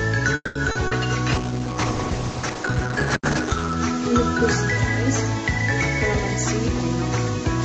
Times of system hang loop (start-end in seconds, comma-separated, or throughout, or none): none